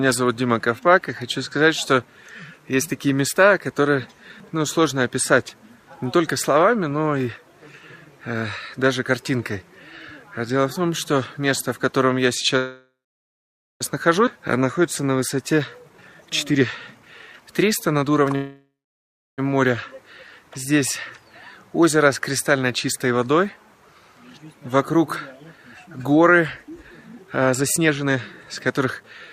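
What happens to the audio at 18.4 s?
At 18.36 s the audio stalls in a call audio freeze lasting until 19.40 s. The last sound is stretched into a fading buzz or hiss and then about 0.67 s of silence, filling roughly 1.02 s in all. This is likely packets held up in transit while the jitter buffer ran dry. Unlike a dropout, nothing is lost: the audio resumes exactly where it stopped, so the pause is inserted rather than cut out.

Just before that, from 15.90 s to 18.35 s, a jitter buffer speed-up runs the audio at about 119% of normal speed. The receiver repeatedly trims short pitch-period-sized slices to drain surplus buffered audio, removing around half a second altogether. The passage sounds hurried, but the pitch stays where it was. That unchanged pitch is what separates it from a plain playback-rate change, which would raise the pitch along with the tempo.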